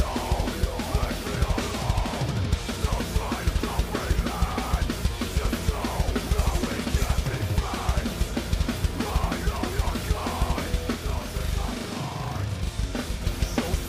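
From 10.9 s to 13.2 s, a channel delay (doubling) occurs: one channel runs 40 ms late and is summed to mono with the other. The late copy arrives at the same level, heard as a doubling or a single slap echo trailing the sound.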